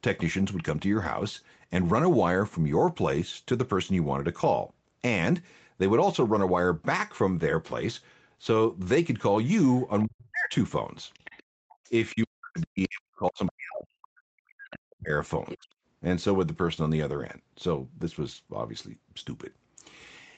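At 9.79 to 9.83 s a faint scrap of the other side's voice leaks through, roughly 35 dB under the speech. Residual loudspeaker echo that the echo canceller failed to remove is the likely cause. From 10.04 to 10.54 s the speech is suppressed in double talk. The talker's voice sinks by around 40 dB for half a second while both sides overlap, likely because the canceller cannot tell its own talker from the echo.

From 11.14 to 12.26 s a longer stretch of the other side's voice leaks through at roughly 25 dB below the speech. Inside it, from 11.43 to 11.77 s, the background is gated by the echo canceller. The room sound drops by about 40 dB while the loudspeaker plays, then returns. From 12.12 to 15.12 s the speech is suppressed in double talk again, dipping by around 40 dB for about three seconds. At 12.58 to 12.63 s a brief leak sits roughly 30 dB down.

From 15.49 to 15.58 s the strongest leak of the other side's voice comes through, only about 15 dB below the speech. 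At 15.56 to 15.72 s the speech is briefly suppressed in double talk, falling by around 40 dB. Through all of this, the Opus call path's 8 kHz bandwidth limits the top end.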